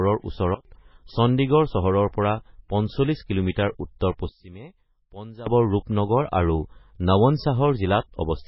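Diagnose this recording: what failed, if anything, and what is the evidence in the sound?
The speech is watery and swirly throughout, with nothing above 5.5 kHz and weak frequency detail flickering on and off between frames. The heavy damage fits a bitrate around 16 kbps, and the likely cause is MP3 compression at the codec stage. A plain low-pass filter would remove the treble but would not produce this frame-to-frame swirl.

Two sudden gain jumps occur. From 0.55 to 0.65 s the level drops by about 20 dB, and from 4.29 to 5.47 s it drops by about 18 dB. In both cases the speech and background noise step down together and then step back instantly. That points to a digital gain change applied without a ramp, likely in processing. A gradual fade or an automatic gain control would glide between levels instead of switching abruptly.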